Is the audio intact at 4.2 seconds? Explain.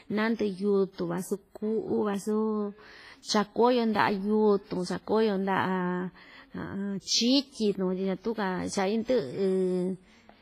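No. At 4.2 seconds, as through the whole clip, the speech has that ringing, washy smear, with hiss pumping along with the signal and nothing above 15.4 kHz. That's likely heavy WMA compression, fitting a low bitrate around 24 kbps, where long transform blocks spread quantisation noise and weak detail gets dropped.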